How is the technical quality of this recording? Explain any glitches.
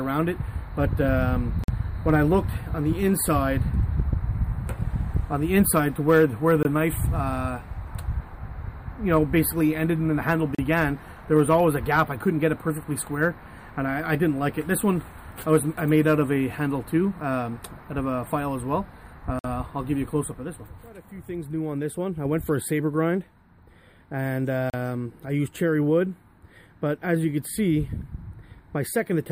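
The recording has five short dropouts to silence. At 1.64 s, 6.63 s, 10.55 s, 19.39 s and 24.70 s the audio cuts out for 46, 20, 37, 53 and 37 ms, then carries on. That's likely a Bluetooth stall: interference delays packets, the receiver's buffer empties, and playback pauses until the resent data arrives.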